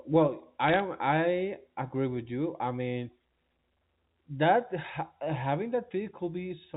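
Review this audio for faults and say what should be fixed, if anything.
Bit errors on the digital phone line crackle from 0.68 to 0.80 s. Flipped bits, roughly one in two hundred, corrupt single G.711 samples, showing as lone waveform spikes and thin vertical spectrogram streaks. Error-protected transport or a clean line would prevent this.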